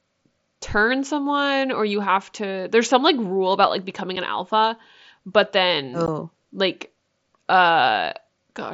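Unconcealed Bluetooth headset packet loss at 4.16 s and again at 6.06 s: short stretches of the headset's voice stream never reached the phone, and nothing was synthesised to cover them, so silence or an idle pattern fills each gap. The first hole lasts 7.5 ms, which fits one lost packet, and the second 15 ms, consistent with two in a row. Both open and close abruptly, chopping the speech, heard through the mSBC link's 8 kHz bandwidth and light grain.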